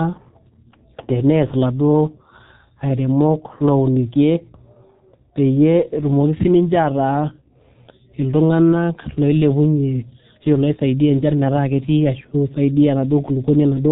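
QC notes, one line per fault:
Throughout: G.723.1 codec. The speech sounds muffled and hoarse, with consonants smeared into a dull, boxy blur and heavy codec damage on every phrase. Nothing reaches above about 3.8 kHz, so sibilants and crisp attacks are gone. The codec works in 30 ms frames at a rate that fits roughly 6.3 kbit/s, rebuilding the voice from a coarse model that updates slowly. Fast changes between sounds fall between updates and come out rough and grainy.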